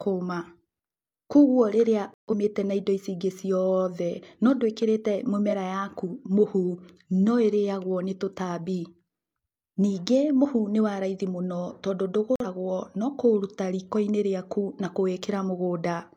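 At 2.14 to 2.34 s, just before "na indo ici ingĩ", and again at 12.36 to 12.46 s, a corrupt frame muted fault cuts the speech to abrupt silence for what sounds like several frames and then one. Timing is kept, unlike a dropout that skips ahead. At 5.47 s, a corrupt frame decoded fault plays a damaged frame anyway. It produces a roughly 60 ms burst of energy at the wrong frequencies peaking at about -15 dBFS.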